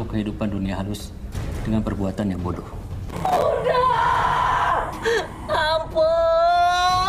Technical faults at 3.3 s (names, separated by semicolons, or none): processor overload crackle